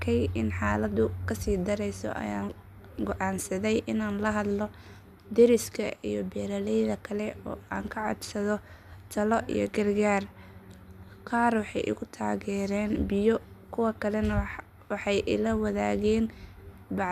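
No technical faults can be heard anywhere in this speech recording.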